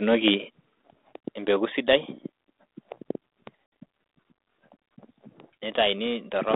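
Microphone volume stepped down at 1.02 s: the level of the speech and its background falls abruptly by about 4 dB in a single step, most likely because the call software judged the microphone input too hot and cut the device's input volume at once.

Packet loss on an ADPCM call from 3.66 to 3.72 s: a 60 ms hard-edged gap of silence where several packets went missing. Because the G.726 decoder's adaptive predictor and step size lose track of the sender's, the speech comes back slightly distorted before settling.

Microphone overload at 6.54 s, right at the end: the peaks overshoot the converter's limit by about 1 dB, so a small share of samples have their tops flattened, giving the final loud moment a harsh, crackling edge. The likely cause is input volume set too high. The 32 kbit/s G.726 line band of roughly 250 Hz to 3.7 kHz stays audible throughout.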